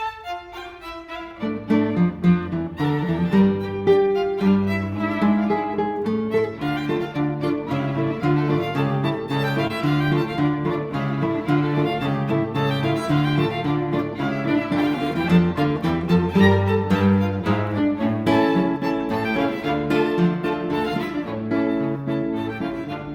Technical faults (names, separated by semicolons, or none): short concealed packet loss